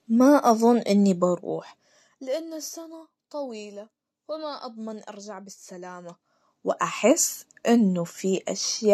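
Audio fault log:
1.26–2.63 s: zipper noise. The level drops about 20 dB in unsmoothed steps, roughly a hundred per second. Each step clicks, giving a ticking buzz.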